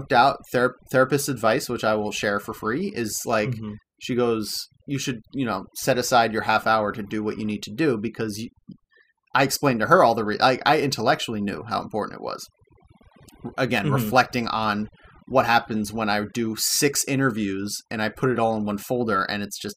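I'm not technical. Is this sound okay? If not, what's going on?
No, not quite. The whole speech clip has overdone noise removal. Someone ran a noise cleaner set far too hard, so whenever parts of the sound got close to what it thought was background hiss, it cut them almost to nothing. That's why the gaps between phrases sound nearly dead silent with little twinkly, sparkly bits.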